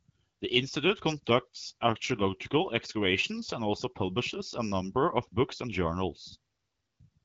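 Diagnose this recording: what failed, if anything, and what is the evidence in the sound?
Nothing has failed in this speech recording; its content stops at about 7.7 kHz, which points to a working AMR wideband (HD Voice) codec path at a rate around 12.65 kbit/s, and that path is behaving as the codec is designed to.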